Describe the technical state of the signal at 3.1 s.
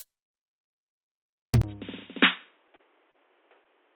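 At 3.1 s the music is band-limited, likely from an input switched to a poorer device at 1.62 s. A 20 ms gap marks the switch. From there to the end, the band is narrower on the spectrogram, and a faint new noise floor sits well beneath the music at much the same level.

Within that stretch, a short stall from a late packet runs from 3.11 to 3.16 s. The jitter buffer ran dry, so the last sound was stretched for 30 ms until the packet arrived, delaying what follows by 30 ms with nothing lost. It is heard as a held moment with a slight buzz or dip, and the waveform shows a briefly repeated cycle.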